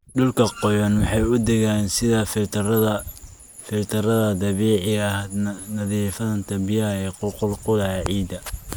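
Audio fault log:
5.58 s, lost LE Audio frames: a brief hiss-like smear momentarily replaces the speech, about 10 ms long, which fits a single lost Bluetooth LE Audio frame. The LC3 decoder filled the gap by repeating the previous spectrum with randomised signs, turning tonal detail into noise.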